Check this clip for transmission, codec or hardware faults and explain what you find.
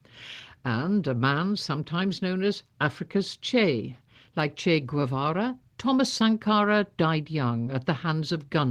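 Two short concealed packet losses are audible, at 6.18 to 6.21 s and at 7.65 s. Audio arrived too late or not at all, so the receiver extended the preceding sound and blended back in. Each sounds like a brief smear or wobble.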